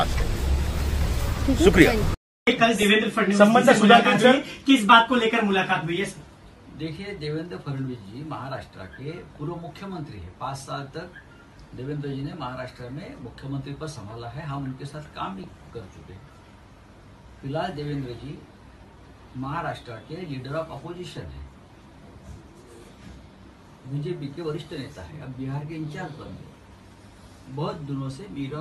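Three bursts of DAB burbling occur, from 2.47 to 3.02 s, 15.40 to 15.98 s, and 21.09 to 21.38 s. Each time, weak reception leaves a bit error rate of a fraction of a percent, enough for errors to slip past error correction into the MP2 data. Corrupted samples put short blips of noise into single sub-bands, and corrupted scale factors make individual sub-bands jump in level for up to a frame. The result is a burbling of noise blips laid over the audio.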